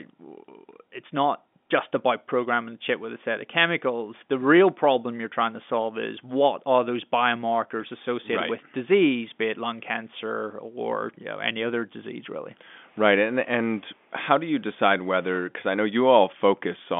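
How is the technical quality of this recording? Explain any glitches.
No technical faults are audible.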